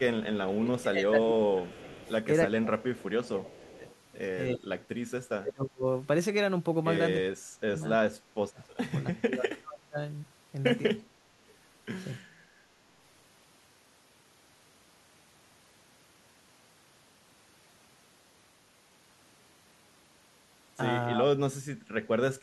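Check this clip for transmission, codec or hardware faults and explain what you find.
Two echo-canceller faults are present in this speech.

Speech suppressed in double talk, at 0.0–3.86 s, 4.54–5.85 s, 7.3–9.98 s and 21.15–21.27 s: the canceller likely mistook overlapping far-end talk for echo and turned the talker down, by as much as about 30 dB.

Echo leak, at 1.75–2.11 s, 2.94–3.04 s, 3.87–3.96 s and 11.48–11.54 s: echo likely slipped past the far-end canceller, returning brief faint copies delayed 303 ms, about 25 to 35 dB below the speech.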